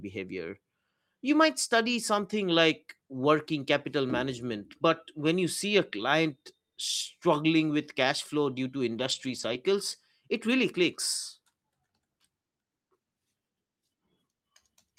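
Speech clip, and right after "cash flow due to", from about 8.95 to 9.53 s, there's a lost packet rebuilt from error correction. The decoder filled in about 300 ms from the low-bitrate copies carried in the following packets, so there's no gap, just a rougher, noisier patch.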